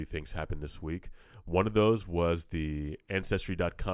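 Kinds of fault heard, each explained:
No technical faults can be heard in this recording.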